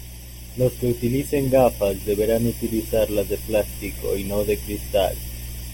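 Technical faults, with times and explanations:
Throughout, channel delay (comb filtering): one channel lags the other by roughly 0.4 ms, and the mono sum cancels at evenly spaced frequencies from around 1.5 kHz, leaving the speech hollow. Unlike a sweeping phaser or smooth treble loss, these notches never move.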